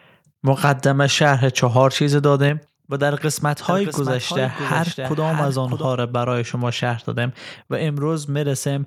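At 0.64–0.70 s, 1.26–1.32 s and 1.64–1.83 s the speech peaks crack harshly, flattened by microphone overload, likely from input gain driving the converter past full scale by about 3, 2 and 1 dB.

At 2.49 s the speech and background fall abruptly by about 4 dB, a microphone volume step-down, likely the call software cutting input gain after those clipped peaks.

From 3.69 to 5.85 s a doubled audio track appears: a dry, full-band copy about 5 dB quieter trails roughly 0.7 s behind, likely a second capture path, starting and stopping abruptly.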